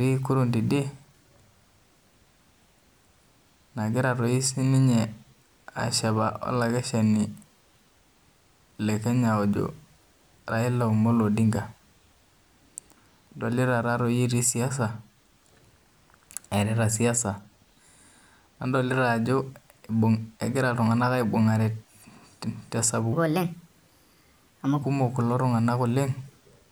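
A speech recording with a section at the wrong speed from 23.13 to 24.82 s: it runs 1.29 times fast, jumping about four semitones higher and hurried, likely from playback against the wrong clock.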